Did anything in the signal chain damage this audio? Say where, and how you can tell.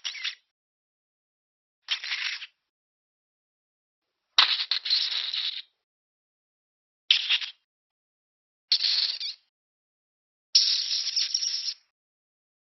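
No, nothing in the signal chain damaged this audio.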